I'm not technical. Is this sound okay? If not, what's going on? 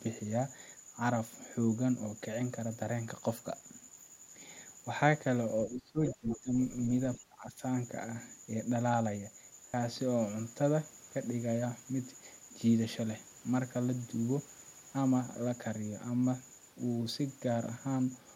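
No. Around 5.67 to 6.52 s and again 7.18 to 7.62 s, the speech is suppressed in double talk. Both sides were likely talking at once, so the echo-removal system turned everything down. The speaker's voice sinks sharply.

Between 6.06 and 6.39 s, the other side's voice is leaking through. The loudspeaker sound likely wasn't fully removed from the microphone, so a second, quieter voice can be heard underneath the speaker.

From 9.69 to 9.74 s there is a Bluetooth stutter. The wireless link dropped about 46 ms of audio, which fits two lost packets. The device replayed its last scrap to fill the gap, so you hear a brief buzzy repeat.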